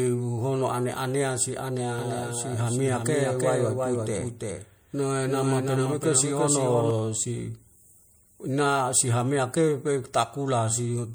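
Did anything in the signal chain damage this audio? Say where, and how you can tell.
Yes. At the codec stage, the whole clip carries plainly audible damage of the kind lossy coding leaves, likely MP3, at a rate that fits about 64 kbps. The speech has a watery, swirling quality because weak spectral lines are being dropped and restored from frame to frame as the encoder runs short of bits, and attacks are smeared. Content stops at 21.3 kHz, consistent with the encoder's fixed treble cut-off.

From 1.99 s to 6.91 s there is a doubled audio track. A second, full-band copy of the speech trails the original by roughly 300 ms at about 5 dB lower. It has no decay tail or room colouration, so it is not reverberation, and it starts and stops abruptly at those two times. The likely cause is either a second capture through a slower path or an edit that left two misaligned copies in the mix.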